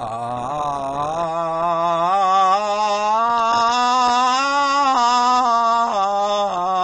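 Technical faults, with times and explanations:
Throughout, AAC compression: the music has nothing above 9.8 kHz, so it sounds dull and smeared, with plainly audible codec damage. The likely cause is AAC-LC at a low bitrate, near 32 kbps, where the encoder drops the top bands and quantises the rest coarsely.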